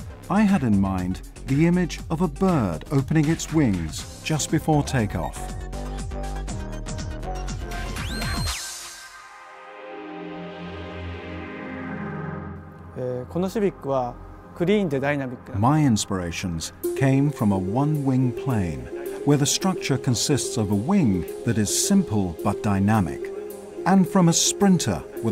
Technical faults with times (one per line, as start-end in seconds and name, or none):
none